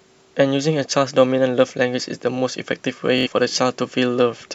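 At 3.18 to 3.28 s a Bluetooth stutter interrupts the speech: packets arrived late or were lost, so the receiver replayed its last buffer as a machine-gun buzz, then skipped about 70 ms ahead, which fits three lost frames. A spectrogram shows identical repeating vertical slices.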